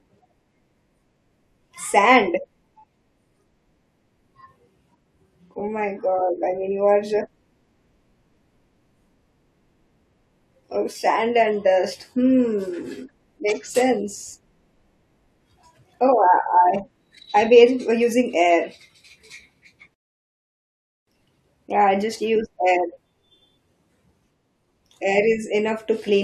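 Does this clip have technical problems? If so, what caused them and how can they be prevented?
No, there are no technical faults to report in this speech recording, so there is nothing to trace back or prevent.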